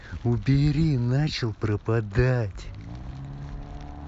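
A short bit of speech, and nothing in it stands out as a technical problem anywhere along the way.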